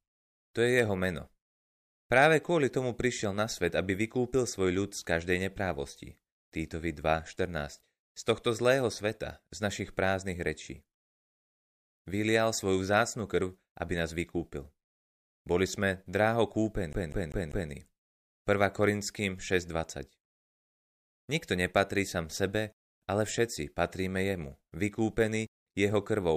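CD stuck on one turn at 16.93 to 17.71 s: the laser skips back each revolution, so a 196 ms slice repeats four times, muted briefly at each jump.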